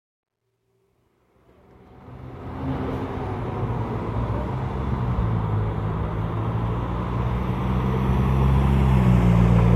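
From 0.0 to 2.75 s the fade-in shows truncation distortion, which fits a 12-bit stage without dither. It is gritty, worst until 1.47 s, with roughness that eases as the level rises, unlike steady noise.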